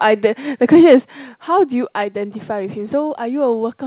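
A speech recording band-limited to nothing above 4 kHz, which fits a G.711 A-law call path at 64 kbps. From 0.73 to 0.95 s the peaks are flattened with a harsh crackle, likely microphone overload, driving the converter about 3 dB past full scale on a few percent of samples. The level then drops abruptly at 1.02 s by about 5 dB and again at 2.04 s by about 2 dB, likely the microphone volume stepped down by the call software reacting to that clipping.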